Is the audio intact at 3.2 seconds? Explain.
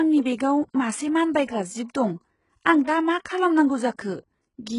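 No. From 3.23 to 3.25 s there is pre-echo: about 24 ms of hiss precedes an attack, as block-spread quantisation noise fills the quiet moment before the onset and softens it. Throughout the speech, the treble above 11 kHz is absent and the upper band sounds gritty and metallic, likely from heavy HE-AAC compression at a very low bitrate, around 12 kbps, with the highs rebuilt by band replication.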